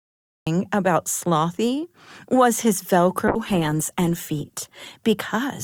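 The audio opens on digital silence until 0.47 s, then a cut-off start drops straight into an ongoing sound with no attack or fade. The waveform shows a flat line jumping abruptly into the signal, and the spectrogram a hard vertical edge.

From 3.29 s to 5.03 s a call bitrate drop makes the sound rough and muffled, which fits the encoder falling from roughly 96 to 17 kbps for about 1.7 s. On a spectrogram the upper frequencies vanish above a sharp ceiling, with smeared, blocky texture below.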